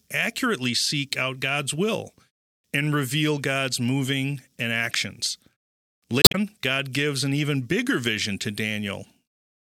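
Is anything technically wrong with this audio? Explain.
Yes, there's one fault. From about 6.21 to 6.35 s there's damaged data in the compressed stream: a stretch of corrupted bytes makes the decoder misread those frames and lose sync until it finds a clean header, so the speech briefly breaks up.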